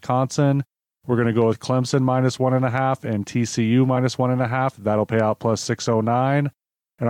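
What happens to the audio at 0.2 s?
Nothing goes wrong at 0.2 s; the speech at that point is intact, with no fault to be heard there.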